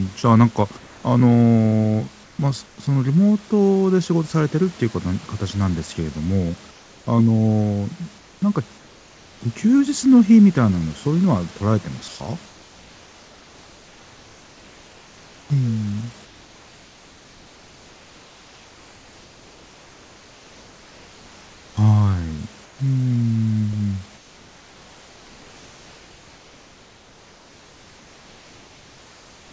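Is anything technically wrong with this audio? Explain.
Yes. In the pauses at 0.77–1.04, 2.24–2.78, 6.71–7.07, 8.18–9.41, 12.08–15.50, 16.25–21.77, 22.64–22.79 s and from 24.17 s to the end, the room background turns into a smooth, featureless hiss, in most of them about 2 to 4 dB quieter than the real ambience. This is comfort noise in place of the background. It likely comes from discontinuous transmission: the sender stops sending during silence, and the receiver synthesises roughly matched noise until speech resumes.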